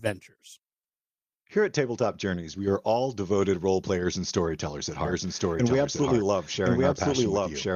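A lost packet rebuilt from error correction sits at 2.03 to 2.05 s. One 20 ms packet never arrived, but the next packet carried a low-bitrate copy of it, and the decoder played that copy in its place. The speech runs on without a gap. For that single frame it sounds rougher and noisier.

A doubled audio track begins at 5.05 s, right after "players and storytellers at", and runs to the end of the clip. A second full-band copy of the speech enters abruptly, about a second behind the original and at roughly the same level. It has no decay or room colour, so it is a clean duplicate of the sound. The likely cause is the same signal being captured again through a slower path.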